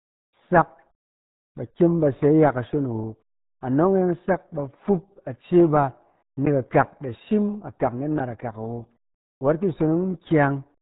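Speech throughout shows RealAudio 14.4 codec damage. Nothing passes above 3.8 kHz. Heavy gargling and muffling point to an 8 kbit/s dial-up rate.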